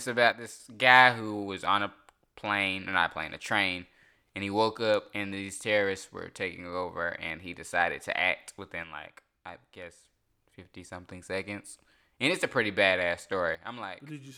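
Speech with three sudden gain jumps, each an instant drop in level. The first is about 6 dB, from 0.32 to 0.60 s, just before "guy who was on". The second is about 6 dB, from 8.83 to 10.05 s, after "he decided to act". The third is about 12 dB, from 13.55 s to the end, after "it's a pretty badass". Speech and background noise fall together, likely from a gain change applied without a ramp. The waveform envelope steps down abruptly, and the spectrogram darkens evenly across all frequencies at once.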